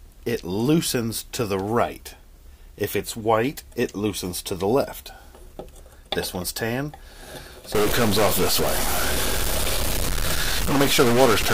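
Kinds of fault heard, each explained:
Stuck bit: from about 7.75 s right to the end, the sound turns harsh and buzzy, and the quiet gaps fill with gritty noise instead of dropping to silence. That points to one data bit likely jammed at a fixed value, so roughly half the samples get shoved off by that bit's weight, a step of about -20 dBFS. That's a fairly high bit, which is why the noise in the pauses is so obvious.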